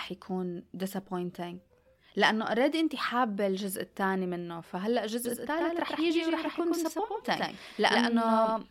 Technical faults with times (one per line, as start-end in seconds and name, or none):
5.25-8.70 doubled audio track